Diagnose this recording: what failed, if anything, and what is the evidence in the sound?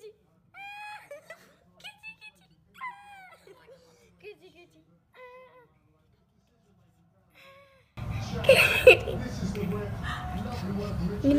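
From 0.0 to 7.97 s the mono sum sinks about 32 dB to a faint residue: likely one channel inverted in analogue wiring, cancelling shared content.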